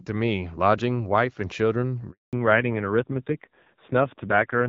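At 2.11 s the audio drops out completely until 2.33 s. This is a handover gap of 220 ms. The call switched networks and no speech frames arrived during the move. The sound fades within a few tens of milliseconds, and whatever was said in that span is gone.

From 2.33 s to the end, the call falls back to narrowband. Before the gap, the sound has the fuller band of AMR wideband HD Voice, at a quality that fits a mid rate of about 12.65 kbit/s. After it, nothing is left above 4 kHz. The speech sounds duller, boxier and rougher, which points to a low-rate narrowband codec.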